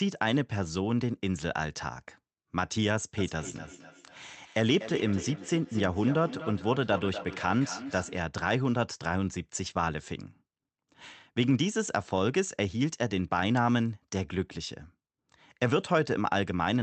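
Two devices in the same room are joined to the call, so one replays what the other's microphone sends and that microphone picks it up again, beyond the reach of either echo canceller. This is feedback echo between two devices. From 3.18 to 8.32 s the speech comes round again roughly every 300 ms, each return thinner and more ringing, the loudest about 11 dB below the speech. The call path's high end stops near 8 kHz.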